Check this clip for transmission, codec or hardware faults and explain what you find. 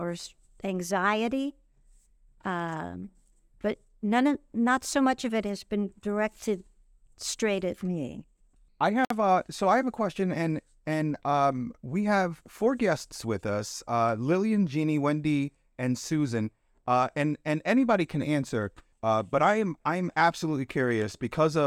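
One fault: a gap at a join of encoded pieces at 9.05–9.10 s, after "straight at me I". Separately encoded segments kept their start delay and padding, leaving a 56 ms gap with smeared edges before the speech resumes.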